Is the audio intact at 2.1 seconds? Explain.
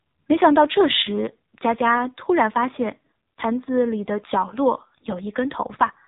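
No, 2.1 seconds sits inside an AMR narrowband mobile codec fault that runs through the whole speech clip. AMR-NB rebuilds the voice from a vocal-tract model fed by a handful of pulses per subframe, and here the damage is heavy, giving a buzzy, synthetic edge that fits a low rate of around 5.9 kbps. Nothing above 3.8 kHz survives either, so the sound is dull, phone-like and missing its sibilant air.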